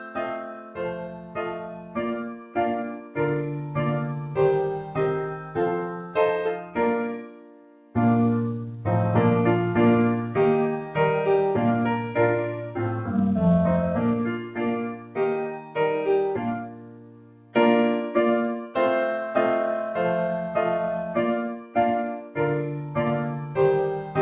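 A noise suppressor built for speech stays active on this non-speech audio for the whole clip. It treats held tones, ambience and reverb as noise, so its gain swings by about 15 dB. Onsets pass while sustained parts and decays are pulled down, and the sound pumps and thins. Unlike a compressor, the gain follows how steady the sound is, not how loud it is. That is why quiet transients survive and loud sustained passages sink.

The sound cut by the noise suppressor is heaviest from 0.0 to 3.18 s, where nearly all of that span is pulled down. It is cut again for roughly half of 4.81 to 7.95 s, and in shorter stretches at 14.38 to 15.76 s, 16.56 to 17.55 s and 21.54 to 22.38 s. Each time the level drops by as much as about 12 dB. This is a ducking rather than a hard dropout, since the sound is turned down instead of vanishing. Through the G.711 call path everything above 4 kHz is missing, as that codec's band limit dictates.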